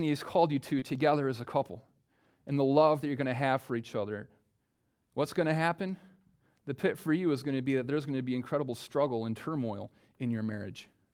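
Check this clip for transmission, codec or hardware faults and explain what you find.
There's one transmission fault in this speech: a short concealed packet loss from about 0.79 to 0.84 s. A few hundredths of a second never arrived, so the receiver extended the preceding sound to bridge the gap and then blended back into real audio. It comes across as a quick smear or wobble.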